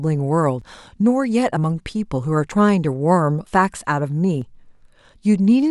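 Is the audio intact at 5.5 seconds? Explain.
Yes, at 5.5 seconds the speech plays through cleanly, with no dropout, click, distortion or other fault at that moment.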